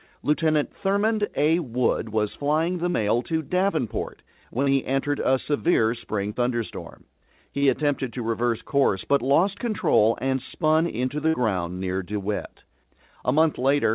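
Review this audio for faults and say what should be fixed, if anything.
Short concealed packet loss occurs at 2.90–2.96, 4.62–4.68, 6.32–6.38 and 7.58–7.64 s. Each time, about 40 ms never arrived, and the receiver extended the preceding sound before blending back, producing a brief smear. On a spectrogram, the harmonics run flat and frozen for that stretch. In the waveform, the cycles repeat too regularly.

A burst of packet loss at 11.28–11.36 s drops about 60 ms. Concealment continues the last sound and turns it down, so it comes out as a held buzz or fading hiss, and then the audio resumes further on. The spectrogram shows a smeared band dimming. The waveform envelope decays, then jumps back.

Nothing above 4 kHz is present, which fits a G.711 mu-law call path, and that band limit is expected for this codec rather than a fault. To prevent the loss, improve network stability and enable forward error correction or redundancy so lost packets can be recovered.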